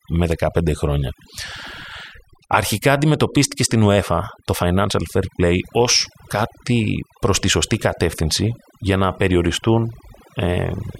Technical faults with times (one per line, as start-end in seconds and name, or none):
0.00-11.00 overdone noise removal